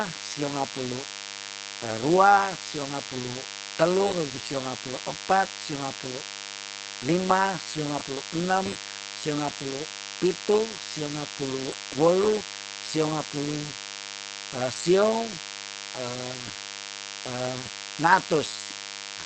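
From start to end the speech carries a DECT cordless phone buzz: a steady, thin 100 Hz buzz rich in harmonics, roughly 15 dB below the speech. It arises when a nearby handset or base station's 10 ms radio bursts are rectified by the audio circuit.

Throughout, the speech also sounds heavily degraded, muffled and hoarse, with nothing above 8.6 kHz. The likely cause is Opus compression in its speech (SILK) mode at a wideband setting, which fits a low bitrate around 12 kbps.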